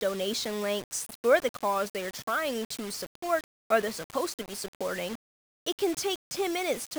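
From start to end, the speech carries grainy, signal-following distortion, likely low bit depth without dither, consistent with rounding to about 5 bits. Error sits only roughly 15 dB below the voice. The waveform shows coarse staircase steps; the spectrogram shows broadband grit tracking syllables, vanishing in pauses.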